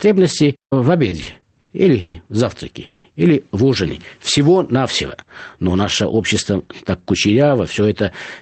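From 1.09 to 2.17 s the speech has repeated stalls (stutter), ending just before "в завтраке или в". Packets kept arriving late, so the jitter buffer ran dry six times. The receiver stretched the last sound over each wait. About 330 ms was filled, nearly a third of that span. The longest gap is 140 ms. Nothing is lost, but the speech drags and hiccups.

Between 2.86 and 3.07 s comes a call audio freeze, after "в завтраке" and before "или в ужине". The sound hangs as a fading buzz for 180 ms, with no true silence. Then it resumes where it stopped. A packet hold-up that emptied the jitter buffer is the likely cause. The delay grows by those 180 ms.

From 5.30 to 6.51 s, leading into "так кучеряво", there is a jitter buffer speed-up. The buffer held too much audio. The receiver trimmed tiny pitch-period slices, roughly 150 ms in total. The speech runs about 10% fast at unchanged pitch and sounds hurried.

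Throughout, the Opus call path tops out near 8 kHz, which fits a bitrate around 20 kbps.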